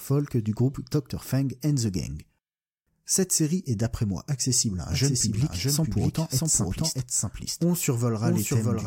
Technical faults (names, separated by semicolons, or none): doubled audio track